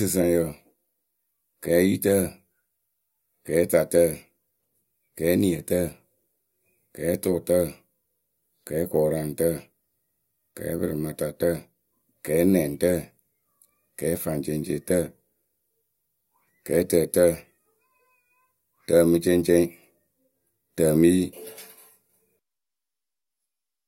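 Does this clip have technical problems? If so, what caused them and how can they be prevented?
No, nothing stood out as a technical problem on listening to this speech recording, so there is no cause to trace and nothing to prevent.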